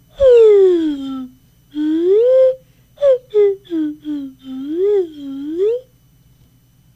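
Nothing stood out as a technical problem on listening to this clip.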